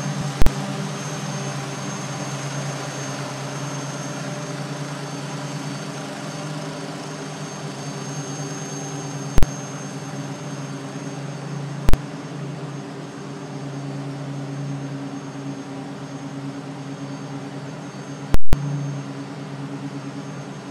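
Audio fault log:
0.42 s, 9.38 s, 11.89 s: invalid numbers at full scale. Bad maths pinned each 46 ms block at one extreme value, fitting a 2048-sample block. It is too short to separate, so each is one loud bang.
18.34–18.53 s: invalid numbers at full scale. A 186 ms block sat flat at one extreme value. It gives a loud pop at each end with no sound between.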